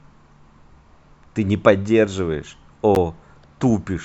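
At 2.95 s the speech drops out for about 11 ms, a gap between stream segments: two segments' timestamps don't meet, and the player fills the hole with silence. It's heard as a tiny click-like break, shown as a hard-edged blank column on the spectrogram and a flat line in the waveform.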